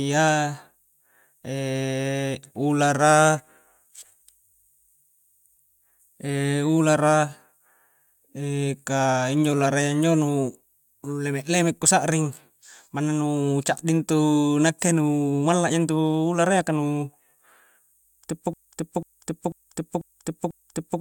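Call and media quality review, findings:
Broken-record loop, 18.54 s to end: 0.49 s speech fragment repeated five times, intended audio lost. Likely a stalled player or stream resending its last fragment.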